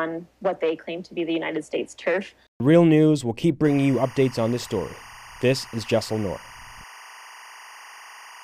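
Timecode bleed enters at 3.65 s and runs to the end: linear timecode from an adjacent track or cable leaks into the audio, its square wave flipping between roughly 1 and 2 kHz, which fits 24-frame code. The result is a steady chirping warble sitting about 20 dB under the sound.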